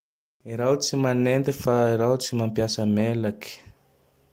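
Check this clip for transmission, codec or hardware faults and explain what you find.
The speech signal holds steady and intact throughout, with nothing from transmission, encoding or the recording hardware interrupting or altering it.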